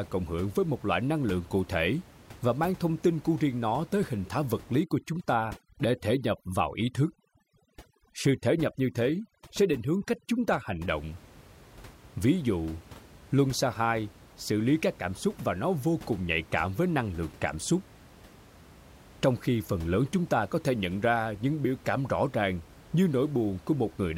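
From 4.84 to 10.89 s, right after "hình thái vật lý", the background drops and breaks up into twinkling specks over near-silence. That is overdone noise removal: the reduction is set so strong that quiet parts of the voice are removed along with the room noise, which sits about 23 dB below the speech.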